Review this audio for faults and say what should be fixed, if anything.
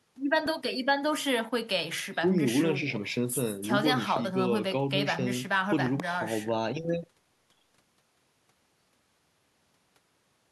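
Loud pops hit at 4.16–4.19 s, then twice at 5.86–6.02 s, jumping well above the speech. A voltage spike, likely from a connector or static, entered the chain. Secure cables and ground equipment before recording.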